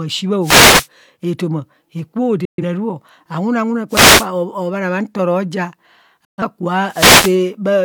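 An analogue FM wireless microphone repeatedly loses radio signal strength as reflected paths cancel, producing three wireless microphone noise hits in this speech clip. Each time the receiver's noise floor climbs and a short swish of static covers the speech: just after "ashi bha" from 0.41 to 0.88 s, again from 3.89 to 4.27 s, and from 6.87 to 7.40 s. Each burst lasts roughly 0.4 to 0.5 s before the signal recovers. Separately, a digital receiver twice fails to decode the incoming stream and mutes itself, causing digital broadcast dropouts at 2.45 to 2.63 s and 6.25 to 6.42 s. In both, the audio drops out over a 3 ms fade into a silent hole, with about 128 ms of programme missing, which fits three lost frames. The speech resumes mid-stream, and whatever was sent during each gap is gone.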